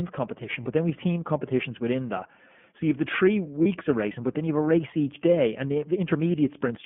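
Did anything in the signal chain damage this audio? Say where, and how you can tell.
Yes. The iLBC codec stage runs through the whole speech clip. Nothing sits below about 150 Hz or above 3.4 kHz, and the voice has the plainly audible roughness and slightly synthetic edge of a narrowband VoIP coder. The codec models the excitation of each block independently, and the texture fits its 30 ms frame mode at around 13.33 kbps. Fine detail is replaced by a coarse approximation, which causes the grainy quality.

Lost iLBC frames, a network-stage fault, occur at 0.63 s and 3.63 s, each lasting about 30 ms, which fits a single dropped packet each time. At both points the sound briefly holds a buzzy, breathy sustain instead of moving on. The decoder fills the missing frame by repeating the last pitch cycle mixed with noise. Because each iLBC frame decodes without relying on the one before, the speech is clean again almost immediately afterwards.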